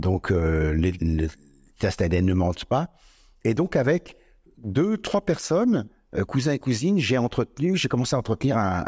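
Speech recording, no technical faults audible anywhere in the clip.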